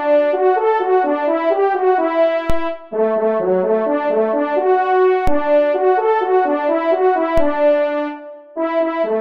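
DC steps at 2.50, 5.27 and 7.38 s jump the waveform's baseline by about −7 to −8 dBFS, then drift back slowly. Each is a low thump, seen as a brief vertical smear at the spectrogram's bottom.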